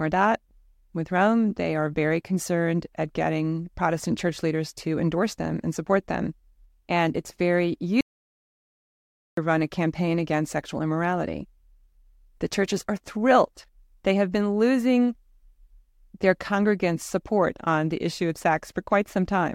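At 8.01 s the speech cuts off mid-flow into dead silence, no room tone at all, until 9.37 s. That's an audio dropout to silence, about 1.37 s lost, likely from the input briefly disconnecting or muting while the recorder kept writing silence.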